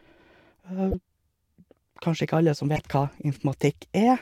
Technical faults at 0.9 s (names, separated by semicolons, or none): corrupt frame decoded